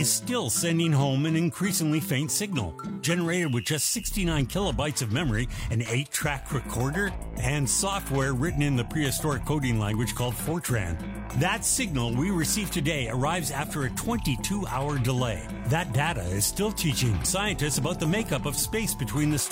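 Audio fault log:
Nothing stood out on listening.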